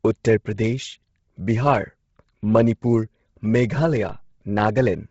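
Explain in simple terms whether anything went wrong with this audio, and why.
The speech has a grainy, breathy edge from start to finish, and the sound is cut off with nothing above 7.7 kHz, so it lacks the crisp top end. That's likely Bluetooth LC3 compression, the codec wireless earbuds and headsets use. It chops the sound into 10 ms slices and, when squeezed this hard, throws away most of the high detail and fills the gaps with hiss. That's where the fuzzy, whispery quality comes from.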